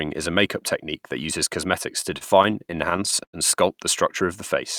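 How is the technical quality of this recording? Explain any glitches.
The recording has one real problem: a patch of repeated stalls (stutter) between 2.01 and 3.35 s. Packets arrived late or slower than playback, so the jitter buffer kept running dry, 13 times in that stretch. Each time the receiver stretched out the last bit of sound until data caught up, filling about 237 ms in total and nearly a fifth of that span, with the longest hold at 93 ms. Nothing gets dropped, but the speech drags and hiccups there.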